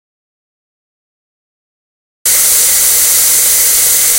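From the very start until 2.26 s there is an audio dropout to silence: the everyday sound is absent, with no room tone at all, and then begins abruptly. The likely cause is lost input while recording carried on. The waveform shows a flat line, and the spectrogram is blank.

Hard clipping affects the whole clip, audible once the sound returns after 2.26 s. The signal was driven about 11 dB beyond what one stage could pass, so around 15 percent of samples were cut off flat. It sounds like distortion on the peaks. The waveform shows squared-off tops, and the spectrogram shows harmonics smeared far up into the high kHz range.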